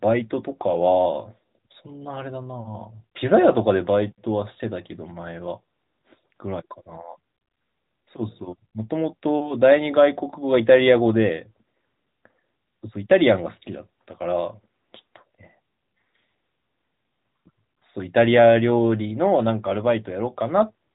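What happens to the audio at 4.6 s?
Nothing goes wrong at 4.6 s: the speech carries on intact through that moment, with only the steady narrowband sound of the AMR-NB mobile codec, which stops short of about 3.8 kHz.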